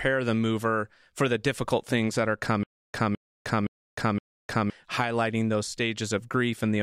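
Speech with a stutter with silent gaps from 2.63 to 4.70 s: after "difficult things that are", a 209 ms fragment repeats four times, with 307 ms of dead silence between repeats, before "highlighting those" resumes. The likely cause is a stalled player or stream replaying its last buffer on each retry, so the audio in that span is lost.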